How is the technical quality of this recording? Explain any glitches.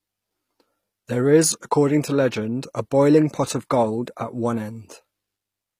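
The recording is marred by plainly audible codec damage throughout. The treble sounds gritty and metallic, and s sounds come out lispy. This is likely HE-AAC compression, consistent with a low bitrate around 24 kbps. The codec kept the lower spectrum and synthesised the highs from copied bands.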